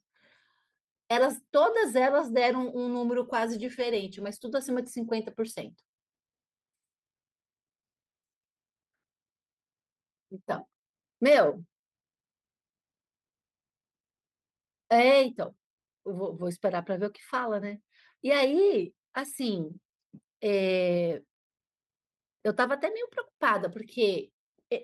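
Nothing stood out as a technical fault on listening to this speech recording.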